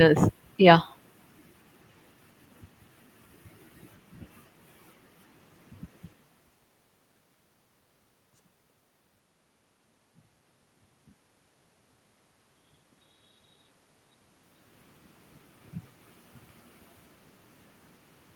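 No technical faults can be heard in the speech; the background noise belongs to the room itself, and the level shifts around 6 s and again around 14 s come from the talker moving relative to the microphone, not from the signal chain.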